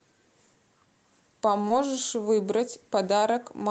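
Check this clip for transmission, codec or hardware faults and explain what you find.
Two brief transmission faults sit close together in this speech, only about two hundredths of a second apart, just before the middle of the clip.

Short stall from a late packet, 1.61 to 1.66 s: a packet arrived late and the jitter buffer ran dry, so the receiver stretched the last sound by about 24 ms and then resumed where it left off. Nothing is lost, but the sound is held slightly too long, with a faint buzz or dip.

Short concealed packet loss, 1.68 to 1.72 s: about 20 ms of audio never reached the decoder, and the receiver filled the gap by extending the preceding sound before blending back into real audio. It comes across as a quick smear or wobble where a short sound may drop out.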